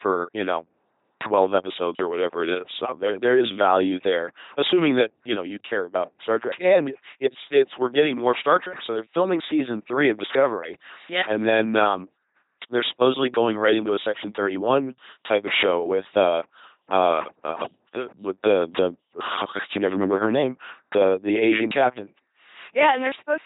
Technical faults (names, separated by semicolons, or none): LPC-10 vocoder